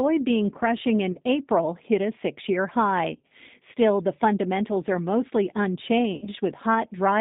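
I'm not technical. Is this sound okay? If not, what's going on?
No. The whole call went through the G.729 codec, a phone-line voice squeezer. Everything above the phone band is gone, so speech sounds thin, rough and slightly robotic.

There is also VoIP packet loss concealed by the speech codec at 1.12 to 1.19 s, 3.14 to 3.31 s (just after "hit a six year") and 6.15 to 6.29 s. Bits of the call went missing. The phone guessed the gaps, giving brief buzzy or noisy, fading smears.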